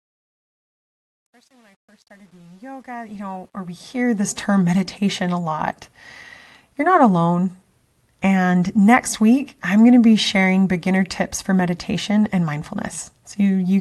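From 0 to 4.43 s, the fade-in shows truncation distortion. The gain stage dropped low bits without dither, which fits about a 10-bit word length. Until 3.29 s the quiet sound turns gritty. It clears before "meditation a lot".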